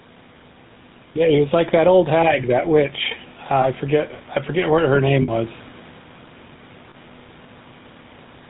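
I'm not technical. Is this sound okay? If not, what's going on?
No. Throughout, the level breathes, with loud and soft parts squashed closer together. That is gain pumping, likely caused by the recording level being set too high and an automatic limiter pulling it back on each loud syllable.

The whole clip also carries the sound of the GSM full-rate codec, the original mobile-phone coding. It rebuilds the voice from a simple model and discards everything above 4 kHz, so the speech sounds muffled, buzzy and gravelly, as on an old phone call.

There are three short dropouts where lost GSM frames were patched by repeating the last good sound: at 3.62 to 3.66 s, at 5.22 to 5.29 s right after "forget what her name", and at 6.90 to 6.95 s. Each is heard as a brief metallic, ringing smear lasting a few hundredths of a second.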